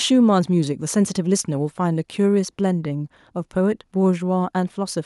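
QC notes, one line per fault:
No faults to note.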